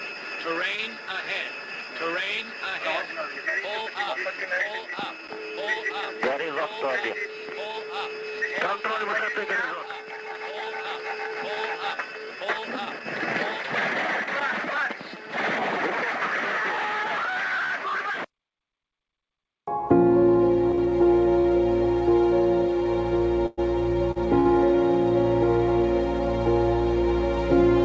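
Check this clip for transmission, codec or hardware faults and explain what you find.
There are two kinds of network fault here, both late in the clip, carried over a call path whose band stops at 8 kHz, which fits G.722 at 64 kbps.

Short stalls from a late packet occur at 20.75, 21.41, 24.11 and 24.40 s. The sound briefly hangs with a slight buzz or dip for 29, 29, 43 and 58 ms. The jitter buffer emptied and the receiver stretched the last sound until the packet arrived.

A call audio freeze runs from 23.46 to 23.60 s. The sound holds and continues as a fading buzz or hiss for 113 ms, then resumes with nothing lost. Delayed packets likely drained the jitter buffer.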